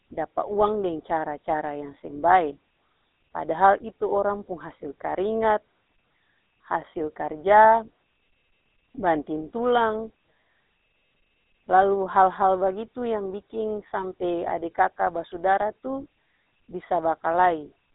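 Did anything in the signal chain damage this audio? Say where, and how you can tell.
Yes. From start to finish the speech has a buzzy, gravelly roughness, and the band is narrow: nothing reaches above about 3.8 kHz, with the usable range sitting at roughly 200 Hz to 3.7 kHz. That points to the codec stage, specifically the GSM full-rate codec, consistent with a 13 kbps stream. It models the vocal tract and excites it with sparse, evenly spaced pulses, keeping only one excitation sample in three, which produces the grainy texture heard here.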